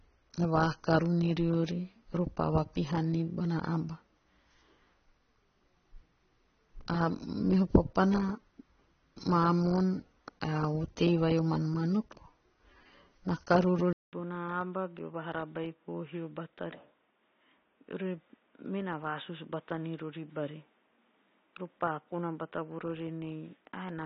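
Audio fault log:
Throughout: AAC compression. The whole speech track sounds dull and smeared, with a warbling, fizzy edge on sibilants and held sounds, likely from low-bitrate AAC-LC, around 24 kbps, where coarse quantisation lowers the cut-off and leaves gaps in the upper spectrum.
13.93 to 24.05 s: input switched to a poorer device. After a 200 ms silence the sound turns narrow and boxy, with nothing above 3.8 kHz, about 10 dB quieter, and carrying new background noise roughly 35 dB below the speech, likely a change to a lower-grade microphone or headset call profile.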